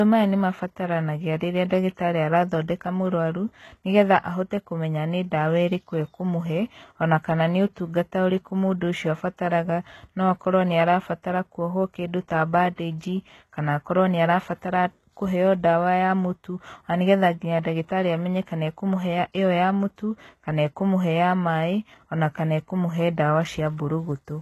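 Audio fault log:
Throughout: low-bitrate audio saved at a high bitrate. The speech has no content above 12.3 kHz. The likely cause is a very low-rate encode, which fits 16 kbit/s HE-AAC, re-saved as 192 kbit/s MP3. The re-encode cannot restore the removed band or the detail lost in the first encode.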